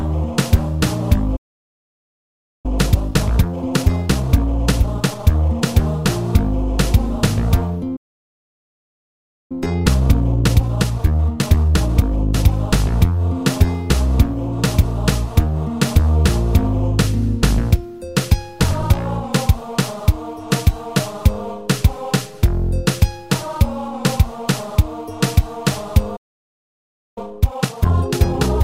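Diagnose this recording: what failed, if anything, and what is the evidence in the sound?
Playback stalls at 1.36 to 2.66 s, 7.96 to 9.52 s and 26.16 to 27.18 s: the sound cuts out in mid-flow for about 1.3 s, 1.5 s and 1.0 s before playback recovers. This is a playback-stage failure, most likely the player's buffer running dry or its audio thread being blocked, so nothing reached the output until data arrived again.

Time-compressed catch-up follows each stall, from 2.66 to 5.66 s, from 9.52 to 12.52 s, and from 27.18 s to the end. The audio sounds hurried while its pitch stays unchanged. The player is clearing its backlog by dropping small slices and cross-fading across the joins. That runs the material 1.25 times faster after the first two stalls and 1.5 times faster after the last.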